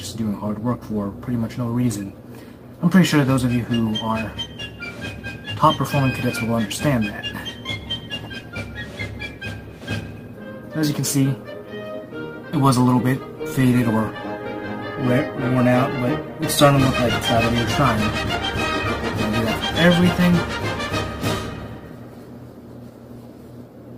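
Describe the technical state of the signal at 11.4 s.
At 11.4 s the signal is intact, with no audible dropout, clipping, distortion or other fault at that moment.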